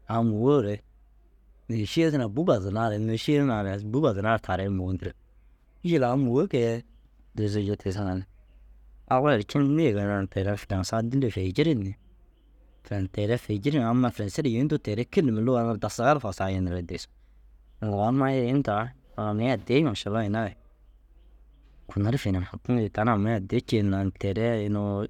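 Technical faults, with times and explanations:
No technical faults are audible in this speech recording.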